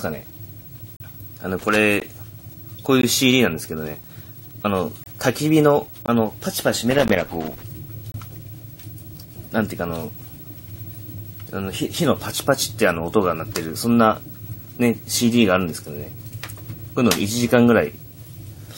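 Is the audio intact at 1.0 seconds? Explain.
No. At 0.96 s the audio drops out for about 38 ms, ending at 1.00 s, because of a gap between stream segments. It falls at a boundary that fits 1-second segments, where the timestamps of the next segment leave a small hole that the player fills with silence. It sounds like a brief, hard-edged dropout. Nothing is lost; the following audio simply starts about 38 ms late.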